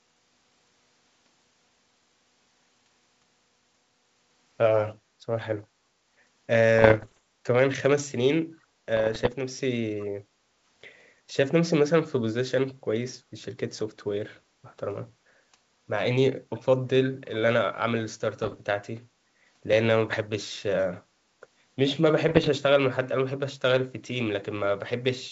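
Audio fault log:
5.0–5.19 s, 10.37–10.49 s, 19.28–19.39 s: background gated by the echo canceller. The mic gets ducked while far-end audio plays, so room sound dips about 6 dB, about 8 dB at 19.28, for 0.1–0.2 s.
6.79–7.18 s, 8.97–9.33 s, 18.42–18.57 s, 20.08–20.27 s, 22.29–22.49 s: bit errors on an ADPCM link. Flipped bits, roughly one percent (lighter at 18.4 and 20.1 s), knock the G.722 decoder's step size and predictor off, giving pops, rough bursts and brief level jumps.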